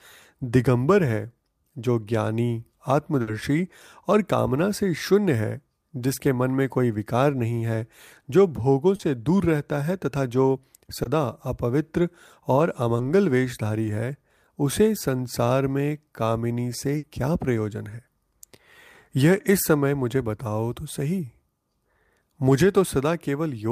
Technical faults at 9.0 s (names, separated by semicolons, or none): short concealed packet loss